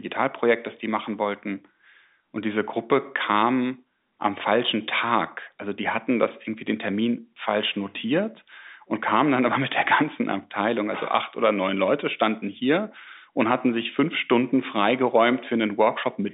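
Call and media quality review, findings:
No faults found in this speech clip; the band tops out near 3.8 kHz with nothing heard above it, as expected of the G.711 telephone coding, which sounds consistent with a 64 kbps A-law line, with no codec damage audible.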